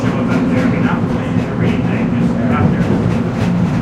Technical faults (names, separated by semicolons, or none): none